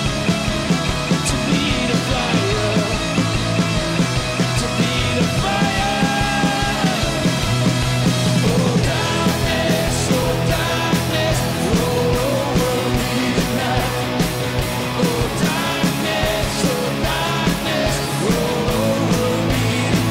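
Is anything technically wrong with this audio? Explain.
No, nothing in this audio is technically wrong.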